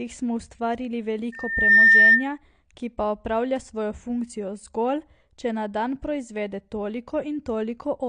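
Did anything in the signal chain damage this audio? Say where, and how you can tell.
Yes, two stages left marks. Throughout the speech, the sound is dull and smeared, with nothing above 9.8 kHz, and sibilants carry a fizzy, warbling texture. This is likely AAC compression at a low bitrate, around 32 kbps, in the codec stage. A plain low-pass filter would remove the top end cleanly. Here, the encoder starved bands inside the remaining range, which a simple filter does not produce.

From 1.32 to 2.29 s, just after "smo ustvarili" and ending before "ki pa opravlja svojo", a loudspeaker feedback squeal appears. It is a single tone at 1.8 kHz that swells over under half a second to about 15 dB above the speech. This is an acoustic loop in the analogue path: the microphone picked up its own loudspeaker, and the loop gain exceeded one at that frequency. A steady test tone or electrical hum would start at full level, but this one grows by itself.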